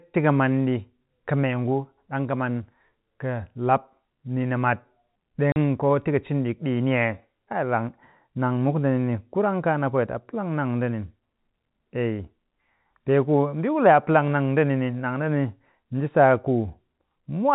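At 5.52 s the speech drops out for 40 ms, ending just before "koo tika cin ɗik". This is packet loss filled with silence: the receiver got nothing for that stretch and played silence, which fits two lost 20 ms packets. The hole starts and stops abruptly. Unlike concealment, which would smear or repeat the preceding sound, this gap is dead and clean-edged. The telephone-band G.711 coding carries on normally around it.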